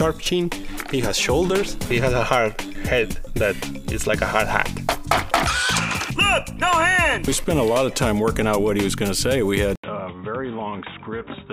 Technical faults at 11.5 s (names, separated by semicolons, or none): input switched to a poorer device